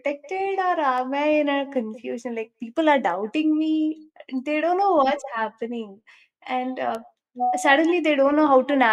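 Speech, with two bit error spikes: sharp broadband ticks at 0.98 s, just before "I in a confusion", at about -25 dBFS, and at 6.95 s at about -19 dBFS. Each sounds like a flipped bit spanning roughly three samples.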